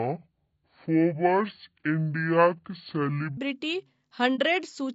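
Section at the wrong speed, from 0.00 to 3.37 s: this opening stretch of speech runs at about 0.6 times its recorded speed, most likely because it was played or edited against the wrong clock. Pitch and tempo fall together, so the voice sits roughly ten semitones low, deep and dragged out, then snaps back to natural speed and pitch at 3.37 s, where the clock mismatch ends.

Low-delay AAC compression runs through the whole clip, likely from AAC-ELD, the low-delay codec used on video calls, at a rate that fits about 32 kbps. At this low bitrate the coarse quantization lets noise spread into the gaps between the voice harmonics. The damage is plainly audible: the voice sounds rough and grainy, with a thin, synthetic-sounding top band.

AAC frame loss with muting, from 4.35 to 4.40 s: one frame of coded audio went missing, and the decoder replaced its spectrum with silence rather than guessing. 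The overlapping transform windows fade the sound down into the gap and back up afterwards, leaving a brief soft-edged dropout of roughly 30 ms of missing audio, which fits a single lost frame. The dip is brief.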